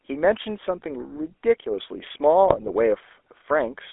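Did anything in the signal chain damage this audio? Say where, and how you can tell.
Yes. The codec stage is the culprit for the whole clip: the speech has passed through the GSM full-rate codec, which rebuilds each voice from a vocal-tract filter excited by a coarse, regularly spaced pulse train. Nothing survives outside roughly 300 Hz to 3.5 kHz, and the voice carries a plainly audible buzzy, gravelly roughness from that thinned excitation. The sound fits the 13 kbps full-rate GSM coder.

A second fault sits in the transmission stage, from 2.48 to 2.71 s, where GSM bit errors reach the decoder. Corrupted bits scramble the filter, pitch and gain parameters, so individual frames come out with a warped spectrum or a sudden level jump. In those roughly 0.23 s the speech breaks into squawks, pops and gargling. The damage points to a weak radio link flipping bits across about a dozen consecutive frames.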